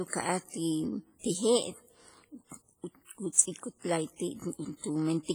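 From the start, the speech sounds ringing and washy, with a hiss that swells and fades along with the signal. The heavy damage points to a low bitrate near 24 kbps and is likely WMA compression. Unlike steady background noise, this hiss follows the sound.

From 3.32 to 3.38 s, a short hiss runs about 54 ms ahead of a sharp attack, leaving the onset soft and smeared. This is pre-echo: codec noise spread across a block fills the quiet before the loud part. Unlike a reverb tail, it comes before the attack.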